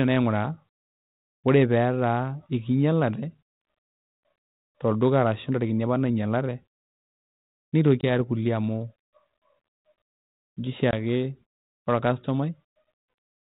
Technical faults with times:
8.01-8.04 packet loss on an ADPCM call
10.91-10.94 packet loss on an ADPCM call

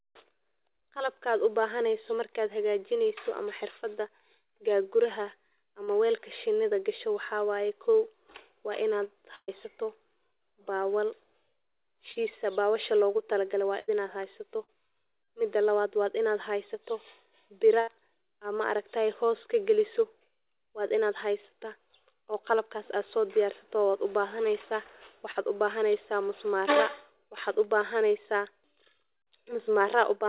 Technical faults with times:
5.84-5.90 short concealed packet loss
9.35-9.51 burst of packet loss
12.12-12.18 short concealed packet loss
13.79-13.91 burst of packet loss
14.64-14.71 short concealed packet loss
17.80-17.90 burst of packet loss
25.31-25.38 short concealed packet loss

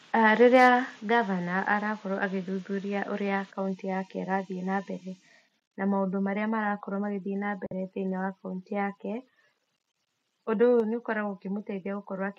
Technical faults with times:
0.55-0.68 microphone overload
1.02 microphone volume stepped down
7.66-7.73 Bluetooth dropout
10.80 microphone volume stepped down

